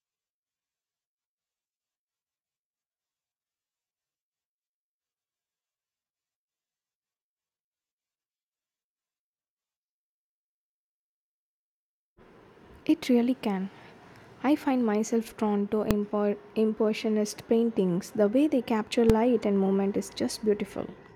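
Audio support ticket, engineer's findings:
Two sharp bangs in the speech, at 15.91 s and 19.10 s, each a single hard click with no decay. Invalid numbers at full scale: a processing stage produced infinite or invalid values that were clamped to maximum output. The first burst, about 1.3 ms, fits a 64-sample block. The second, about 2.7 ms, fits a 128-sample block. Both are too short to separate into onset and release pops. Probable component: a DSP calculation, such as a divide-by-zero or an unguarded filter state.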